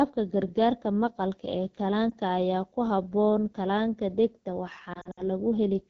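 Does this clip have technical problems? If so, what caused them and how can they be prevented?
Yes. The speech was carried by the AMR wideband (HD Voice) codec at one of its lowest rates; the sound points to the 8.85 kbit/s mode. At that rate the codec rebuilds the voice from a pitch-pulse excitation and a vocal tract filter, with too few bits to shape either finely. The band up to 6.4 kHz comes out rough and raspy, and the top band is only shaped noise, so the damage is plainly audible through the whole clip. Setting the link to 12.65 kbit/s or higher would keep it clear.

Lost AMR speech frames come from radio errors that corrupt frames so they fail their checksum. The decoder then fills the gap by repeating the last good pitch and vocal tract settings at falling gain. From 2.10 to 2.15 s a single missing 20 ms frame gives a brief dip or warble. From 4.93 to 5.22 s the losses are scattered over about 240 ms, which fits roughly six lost frames, with the longest run about 60 ms. 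There the sound drops to near silence within two frames, then returns weak or rough for a moment. Better radio coverage or stronger channel coding and error protection on the link would keep frames from being lost.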